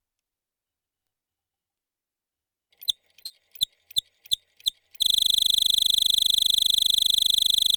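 At 3.26 s there is a short concealed packet loss lasting to 3.32 s. About 40 ms of the stream failed to reach the decoder in time, and the receiver synthesised roughly 38 ms of replacement by extending the preceding sound, then cross-faded back into the real signal. The result is a brief smear in the audio, with the original detail of that instant replaced by a continuation of what came just before.

From 5.04 s to the end of the clip, a system hang loop takes over. The host or driver stopped supplying new data while the audio hardware kept replaying its ring buffer, so a single 40 ms segment repeats exactly, over and over. At 25 repetitions per second this produces a rapid, rigid stutter bordering on a coarse buzz, with no new material for the remaining 2.7 s.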